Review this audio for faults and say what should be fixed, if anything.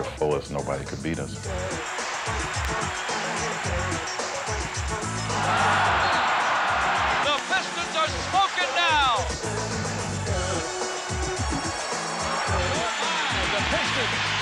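Loud pops occur three times: a pair between 2.65 and 2.81 s, another pair between 7.39 and 7.59 s, and a single pop at 13.67 to 13.69 s, each peaking about 15 dB above the surrounding sound, which continues underneath. The likely cause is a sudden voltage step or pulse entering the signal chain, from a plug, switch, static discharge or driver glitch. On a waveform each pop is a narrow spike towering over the audio; on a spectrogram it is a thin vertical stripe running across the frequency range. To prevent them, secure connections and avoid switching or plugging equipment while recording, ground against static, and keep audio drivers stable.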